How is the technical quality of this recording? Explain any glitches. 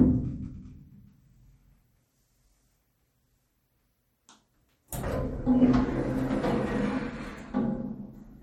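The technical quality is compromised throughout by clearly audible compression damage. Across the whole clip, nothing is present above 17.2 kHz, and the texture turns watery and swirly, with metallic chirps on bright transients and smeared attacks. This is likely MP3 compression at a starved bitrate, roughly what a 45 kbps encode would produce, where the encoder cuts the treble and drops weak spectral detail that flickers between frames.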